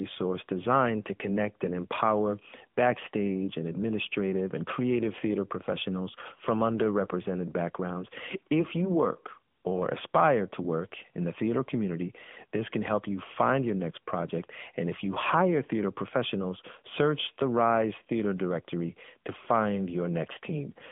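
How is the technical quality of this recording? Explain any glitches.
The recording has a clear, constant fault: the whole speech track has been through the AMR narrowband mobile codec, the AMR-NB coder used on 2G and 3G phone calls. The sound sits in a phone-line band of roughly 150 Hz to 3.4 kHz, with nothing above 3.6 kHz. The coder rebuilds the voice from a vocal-tract model driven by sparse pulses in 20 ms frames. That rebuilding gives plainly audible buzzy, synthetic edges, which fits a mid-rate mode around 10.2 kbps. Simple low-pass filtering would only dull the sound. This fault also adds the codec's artificial texture.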